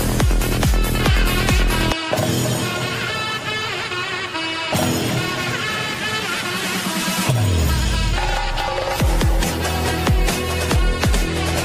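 No technical faults can be heard anywhere in the audio. There is no moment in it that needs a timestamp or any further comment.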